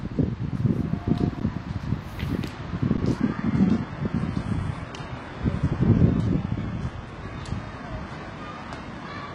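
A recording of everyday sounds with two kinds of fault. At 1.4 s and again at 2.97 s, the sound freezes flat for 10 ms. That is an underrun with held sample. The output buffer emptied, and the converter held its last value. Nothing was skipped, so each gap resumes softly. From 3.2 s to the end, the stream switches to a lower bitrate. The treble vanishes above about 11.1 kHz. The change is abrupt, with no gap. This fits an adaptive stream dropping from a roughly 96 kbit/s AAC-LC version to a 12 kbit/s HE-AAC one after the connection slowed.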